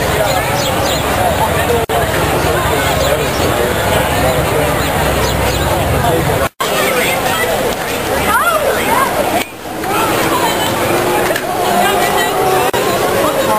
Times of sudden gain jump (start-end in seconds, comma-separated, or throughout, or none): none